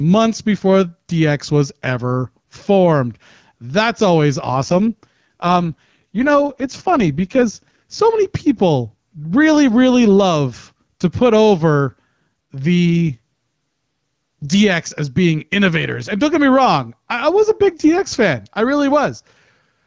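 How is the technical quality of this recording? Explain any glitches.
The recording has two kinds of fault: level pumping that runs the whole way through, and two stretches where the speech turns noticeably rougher.

Gain pumping, throughout: the level ducks by a few decibels under each loud syllable, flattening the dynamics. The likely cause is gain set far too high, with a fast limiter clamping down on every peak.

AMR rate drop, from 4.50 to 8.00 s and again from 12.86 to 14.50 s: the speech grows raspy and synthetic without losing bandwidth or dropping out. This fits a weak radio link pushing the AMR-WB HD Voice codec from 12.65 down to 6.6 kbit/s to spend bits on error protection, then recovering.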